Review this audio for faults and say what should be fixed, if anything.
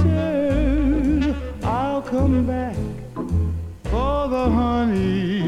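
Nothing here needs fixing, since the signal shows no technical faults anywhere in the recording.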